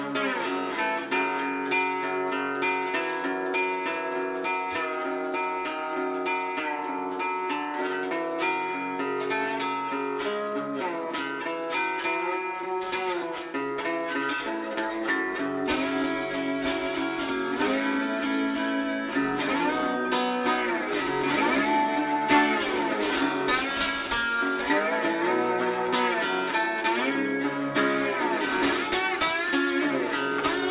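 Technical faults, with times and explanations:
Throughout, aliasing: content above 4 kHz folds back down into the band as gritty, metallic tones at unrelated pitches, sitting roughly 15 dB under the main sound. It fits a drop to an 8 kHz rate with no filtering first, so everything piles up against the band edge.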